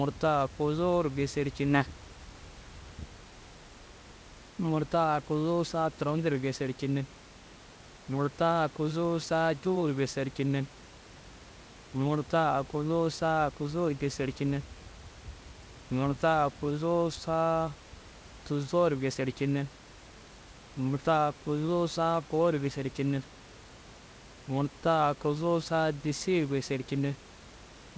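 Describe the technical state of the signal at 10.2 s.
At 10.2 s the signal is intact, with no fault present.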